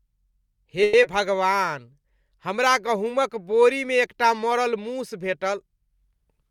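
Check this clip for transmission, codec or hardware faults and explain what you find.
Two transmission faults appear close together near the start of the speech.

From 0.83 to 0.95 s there is a call audio freeze: the sound stalls into a fading buzz for about 100 ms, then resumes where it stopped, with nothing lost. The likely cause is delayed packets draining the jitter buffer. A spectrogram shows smeared, decaying horizontal bands; the waveform shows a tapering envelope.

At 1.03 to 1.06 s comes short concealed packet loss. About 20 ms never arrived, and the receiver patched 10 ms by extending the preceding sound before rejoining the real audio, giving a brief smear. On a spectrogram, the spectrum blurs and then blends back into the real audio.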